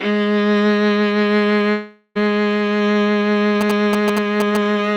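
This music clip has two faults. From 1.71 to 2.17 s the last sound smears into a fading buzz or hiss, ends in a brief silence, and the music resumes further on with about 0.44 s gone. This is likely a long network dropout, with the receiver filling the gap with concealment. From 3.61 to 4.57 s a galloping dit-dit-dit of short buzzes at about 217 Hz sits only a little below the music. These are GSM signalling bursts from a nearby 2G phone, picked up and rectified by the audio circuitry.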